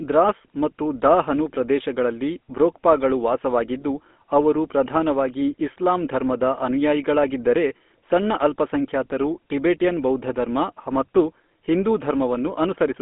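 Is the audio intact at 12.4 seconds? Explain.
No, not really. The whole clip, 12.4 s included, has gone through a GSM full-rate codec, consistent with a 13 kbps stream. It rebuilds the voice from a vocal-tract model fed sparse pulses, leaving it buzzy and gravelly, with nothing above 3.7 kHz.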